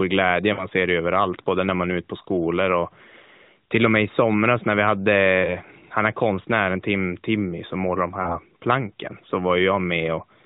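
Three short drawn-out smears interrupt the speech, each sounding as if the voice briefly hangs on one sound and sags in level before recovering slightly rough. These are lost AMR speech frames. The first, at 0.54 to 0.66 s just before "ser det överallt både", and the third, at 8.22 to 8.38 s between "som målar de" and "planken så", each lost two frames, about 40 ms. The second, at 5.42 to 5.57 s before "han är konstnären", lost a single 20 ms frame. In each case damaged frames failed their check, so the narrowband decoder kept repeating the last good pitch and vocal-tract settings at falling gain, causing the held, fading sound before normal decoding resumed.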